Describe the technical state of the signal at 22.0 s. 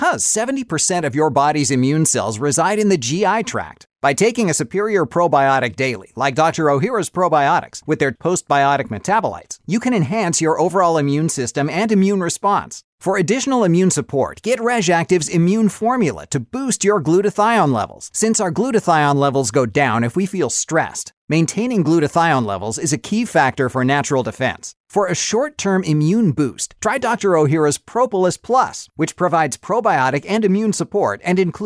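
At 22.0 s the speech signal is intact, with no audible dropout, distortion, clipping or other technical fault.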